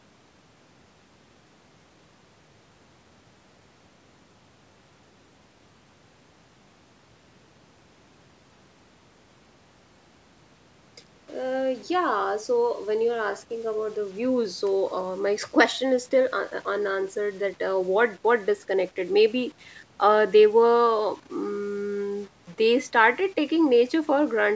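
From start to finish the speech carries a grainy, gritty distortion that rises and falls with the voice itself, most likely low bit depth without dither, with the roughness fitting 8-bit rounding. The error sits roughly 35 dB below the signal and clings to the sound: quiet syllables and decays turn rough or sputter rather than fading cleanly. Unlike a steady dithered hiss, it vanishes in pauses, and it stays present within the call's band, which stops at 8 kHz.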